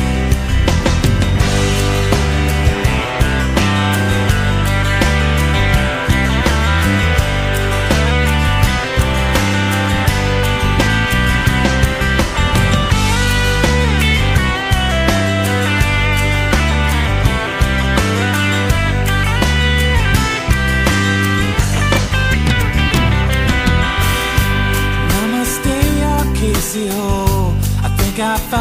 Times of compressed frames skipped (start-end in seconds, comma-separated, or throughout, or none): 10.86, 22.51, 23.66